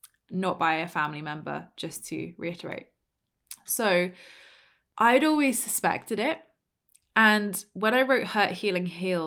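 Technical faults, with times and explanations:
No technical faults can be heard in this speech clip.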